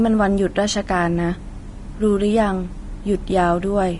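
A speech clip with Vorbis compression damage throughout: nothing is present above 10.6 kHz, and the remaining treble is grainy and hissy, with roughened tone and softened consonant attacks. The likely cause is low-quality encoding; the plainly audible degradation fits a bitrate around 32 kbps.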